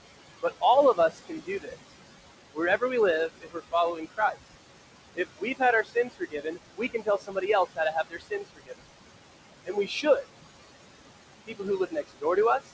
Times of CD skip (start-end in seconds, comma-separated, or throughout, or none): none